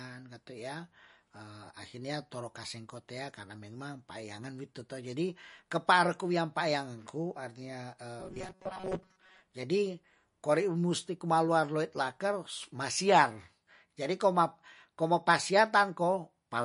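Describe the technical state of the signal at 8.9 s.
At 8.9 s the signal sits inside a stretch of robotic sound from repeated short buffers, running from 8.20 to 9.41 s. Short slices of roughly 5 ms are replayed in place of most of the incoming audio. That likely comes from audio arriving too seldom. It imposes a rigid, metallic 188 Hz buzz on the speech. A waveform shows an identical cycle repeating every 5.3 ms. A spectrogram shows evenly spaced horizontal harmonics of 188 Hz.

Underneath, MP3 compression is plainly audible throughout. The swirly, watery texture and smeared onsets point to a low bitrate, likely around 40 kbps. On a spectrogram the energy stops at a hard ceiling of 10.6 kHz, with patchy, flickering holes where weak frequency lines drop in and out between frames.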